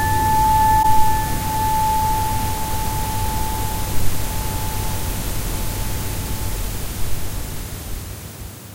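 At 0.82 to 0.85 s, a corrupt frame concealed: the decoder caught damaged AAC data and masked it.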